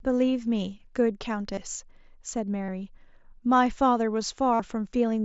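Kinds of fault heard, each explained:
Concealed Bluetooth headset packet loss: audio packets between headset and phone went missing, and the receiver filled each gap by repeating the closest-matching recent stretch of waveform instead of leaving silence. Here it happens three times, at 1.54 s for 30 ms, 2.64 s for 45 ms and 4.54 s for 52.5 ms. Each gap is heard as a brief buzzy, held tone at full level, with a slight warble as real sound resumes through the wideband mSBC link.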